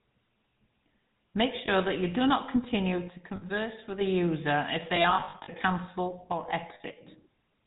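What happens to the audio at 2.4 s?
At 2.4 s the speech is passing through the GSM full-rate codec, as it does for the whole clip: a pulse-driven vocal-tract model with nothing above 4 kHz, leaving a plainly buzzy, gravelly roughness.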